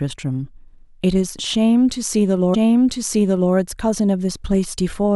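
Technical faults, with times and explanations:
2.53–3.53 s, stream segment repeated: at 2.53 s the speech jumps back with a small blip, and about one second of it plays again before carrying on at 3.53 s. The player queued or fetched the same chunk of the stream twice, adding about 1 s to the running time. Unlike a buffer stutter, which loops a tiny fragment many times, this is a single repeat of a full second of the programme, heard whole.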